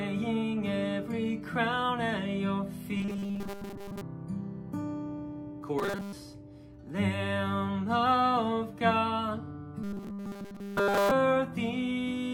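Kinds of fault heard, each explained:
Robotic sound from repeated short buffers: The sound becomes a rigid, metallic buzz at a fixed pitch of 200 Hz. It occurs at 2.97 to 4.02 s, 5.79 to 6.13 s and 9.84 to 11.11 s. The likely cause is new audio arriving too seldom, so the last few milliseconds are replayed to fill the gap. A 200 Hz buzz fits a repeated slice of 5 ms. Most of the first two stretches is repeats, and nearly all of the last.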